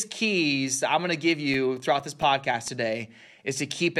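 From 1.08 to 3.13 s, ten CD scratch ticks recur at a steady four or so per second, each only a few milliseconds long. A scratch corrupts more data than error correction can rebuild on each disc revolution, so the player patches the gap. Their strict regularity separates them from random vinyl crackle.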